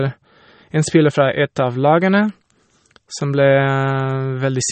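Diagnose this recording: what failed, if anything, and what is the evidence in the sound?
The codec stage is the culprit, with the damage running through the whole speech clip: the top end stops dead at about 8.4 kHz, and the sound has a plainly audible watery, swirly coding texture. That points to the encoder starving for bits, which fits a low rate around 32 kbps. It's chopping off the treble at a fixed cutoff and zeroing quieter frequency lines frame by frame, so it's likely MP3 compression.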